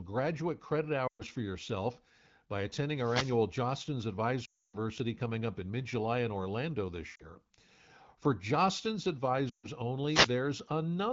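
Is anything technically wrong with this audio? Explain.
Yes. The speech has two kinds of fault.

Lost AMR speech frames occur at 1.07 s (after "graduate credit"), 4.45 s (before "coming up in mid"), 7.15 s and 9.49 s. The gaps last 120, 280, 40 and 140 ms. Radio errors corrupted frames, so the wideband decoder repeated the last good pitch and vocal tract settings at falling gain. The speech smears, then fades quickly toward silence. It returns weak and rough.

Wireless microphone noise hits appear from 2.95 to 3.42 s, just after "for yourself by", and from 10.06 to 10.33 s. The FM microphone's radio signal faded as reflections cancelled. Receiver noise then rose over the speech. Each hit is a short swish of static. The AMR-WB coding at 12.65 kbit/s underneath adds only light damage.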